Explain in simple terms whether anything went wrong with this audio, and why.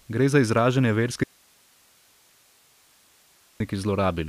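Something did go wrong. At 1.24 seconds the speech suddenly cuts out, and it only returns at 3.60 seconds. That is an audio dropout to a faint residue, lasting about 2.4 seconds. During that gap you hear only a thin hiss, far quieter than the speech. The switch is sharp in both directions, not like a natural pause. The likely cause is that the signal feeding the recording was lost for a moment while the rest of the chain kept running.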